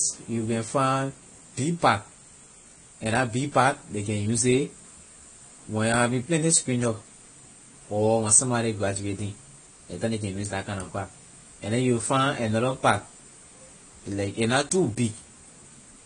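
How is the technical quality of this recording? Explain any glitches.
The recording has one clear problem, and it runs through the whole speech clip: plainly audible AAC compression damage. Nothing comes through above 10 kHz, so the top end is cut off and the speech sounds dull. Sibilants and held sounds have a smeared, warbly, fizzy texture. That's likely AAC-LC coded at a low bitrate, consistent with something around 32 kbps. With that little data, the encoder drops the highest frequencies and coarsely quantises what's left, leaving gaps or noise where detail should be.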